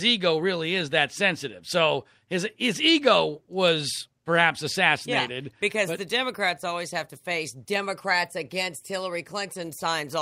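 Speech recording with no audible technical faults anywhere.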